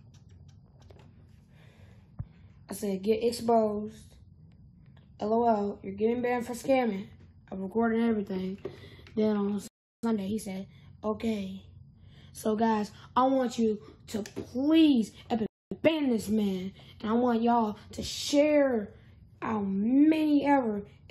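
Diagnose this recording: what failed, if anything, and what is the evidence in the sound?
The playback stage stalls twice: the sound cuts to silence from 9.68 to 10.03 s, about 0.36 s, and again from 15.46 to 15.72 s, about 0.25 s. Each gap lands mid-flow, so the player was likely starved of data or had its thread blocked until it recovered.

Right after each stall comes time-compressed catch-up. From 10.03 to 10.73 s the sound runs at 1.5 times speed, and from 15.72 to 15.96 s at 2 times, hurried but at normal pitch. The player is trimming its backlog by cutting and cross-fading small chunks.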